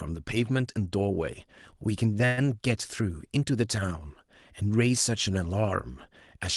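Speech over a call path with Opus coding, its top end ending near 12 kHz. At 2.25 s there is a call audio freeze lasting until 2.39 s. For about 120 ms the last sound is stretched into a fading buzz instead of going silent. The speech then resumes where it stopped, with nothing missing. The added gap shifts everything after it later by 120 ms. The likely cause is delayed packets leaving the jitter buffer empty, so the receiver filled the wait.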